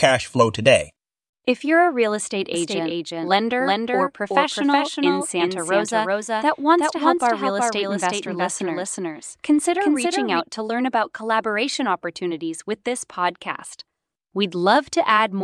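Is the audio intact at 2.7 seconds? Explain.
No. A doubled audio track runs from 2.54 s, just after "real estate", to 10.40 s, before "to learn about collaboration". A dry, full-band copy trails about 0.4 s behind, roughly 5 dB quieter. It likely comes from a second, slower capture path.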